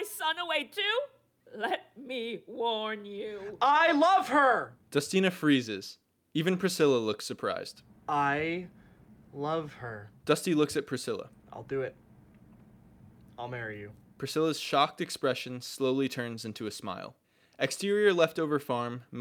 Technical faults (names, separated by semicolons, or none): none